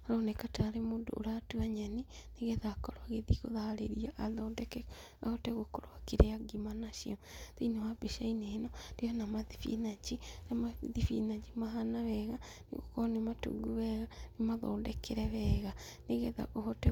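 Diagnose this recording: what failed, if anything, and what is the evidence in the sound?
Nothing failed; no stage shows any audible fault.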